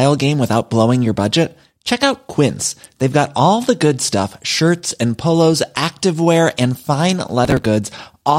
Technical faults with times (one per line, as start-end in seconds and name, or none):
7.45-7.66 processor overload crackle